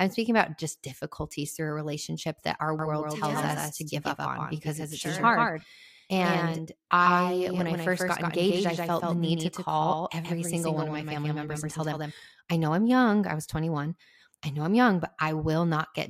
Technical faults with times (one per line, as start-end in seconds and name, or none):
2.79-12.11 doubled audio track